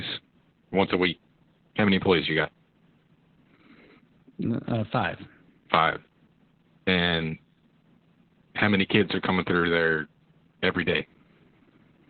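From start to finish the speech carries heavy Opus voice compression. The coder is running its SILK linear-prediction mode at narrowband, so nothing much survives above about 4.4 kHz, and the coarse excitation at what sounds like around 8 kbps leaves it muffled, hoarse and a bit robotic.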